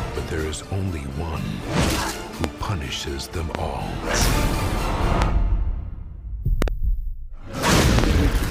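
Loud pops land at 2.44–2.46, 3.55–3.57 and 5.22–5.24 s, then doubled at 6.62–6.70 and 7.99–8.06 s. They're sharp thumps about 20 dB over the sound, likely voltage spikes.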